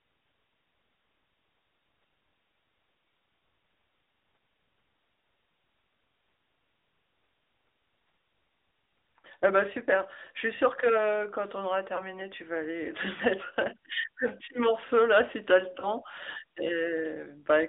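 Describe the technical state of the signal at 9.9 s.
At 9.9 s the speech carries AMR narrowband mobile codec damage, present throughout the clip. The band runs only from about 300 Hz to 3.6 kHz, and the vocal-tract model with sparse pulse excitation leaves a plainly buzzy, synthetic edge, which fits a mid-rate mode near 10 kbps.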